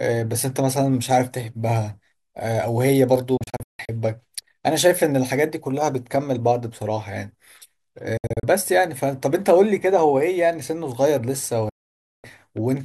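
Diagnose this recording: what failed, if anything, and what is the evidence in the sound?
A digital broadcast dropout, at the reception and decoding stage. The speech mutes with near-instant fades in several short holes at 3.37–3.89 s and 8.17–8.44 s, then a solid 0.54 s gap at 11.69–12.24 s. Lost or corrupted frames were muted. The hole lengths fit 32 ms frames.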